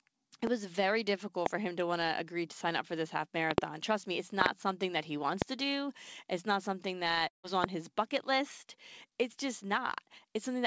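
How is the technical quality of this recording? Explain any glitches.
The recording has two kinds of fault: repeated loud pops and one long network dropout. The audio also has no content above 8 kHz, which fits a wideband call codec such as G.722.

Single loud pops occur at 0.47, 1.46, 5.42 and 7.64 s. A double pop spans 3.51 to 3.60 s, and another double pop falls at 4.41 to 4.48 s. Each peaks about 20 to 25 dB above the sound. They are likely sudden voltage pulses, heard as sharp thumps while the sound continues underneath.

A long network dropout runs from 7.28 to 7.45 s. About 0.16 s of audio never arrived. The receiver stretched the last sound into a fading buzz, and then brief silence followed. The sound resumes with that piece likely lost in transit.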